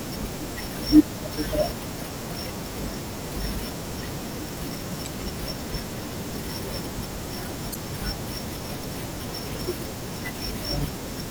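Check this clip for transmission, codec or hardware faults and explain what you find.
The speech carries one kind of fault: damaged data in a compressed stream, occurring twice, at 5.05 to 5.07 s and at 7.72 to 7.76 s. In each spot, corrupted bytes in the encoded stream left the decoder unable to parse the affected frames. It lost sync and had to hunt for the next valid frame header before output resumed. Each event is heard as a short chirp, squawk, click or hole lasting roughly 20 to 35 ms.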